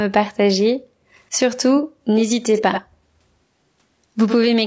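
Throughout, the speech sounds rough and grainy, with noise between harmonics and a synthetic top band, likely low-delay AAC compression at a rate that fits about 32 kbps. Nothing is heard above 8 kHz. At 1.76–1.81 s, 2.55–2.82 s and 4.26–4.47 s, a copy of the speech trails about 86 ms behind, roughly 10 to 15 dB down, likely an echo leak from a loudspeaker the canceller missed.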